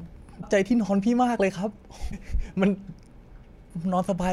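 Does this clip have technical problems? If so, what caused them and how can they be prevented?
Yes. A broken MP3 bit reservoir is the likely cause of two glitches in the speech, at 0.41 to 0.44 s and 2.10 to 2.13 s. Each lasts about 30 ms, roughly one frame, which fits MP3's 26.1 ms frame. After frames drop out, the next frame looks back into the reservoir for borrowed bits, finds another frame's bytes, and the decoder outputs garbage while the speech jumps ahead. To prevent this, cut or splice MP3 streams only on frame boundaries that don't depend on reservoir data, or re-encode after editing.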